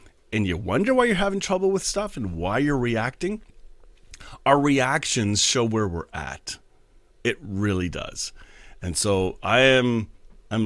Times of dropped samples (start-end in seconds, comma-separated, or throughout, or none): none